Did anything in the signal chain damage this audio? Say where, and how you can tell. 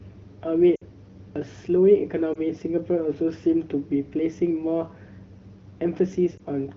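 Yes, lost AMR speech frames on the radio link: a drop to near silence at 0.76–0.83 s (about three frames) and brief dips or warbles at 2.33–2.39 and 6.37–6.42 s. These come from decoder concealment, which reuses the last good settings with falling gain.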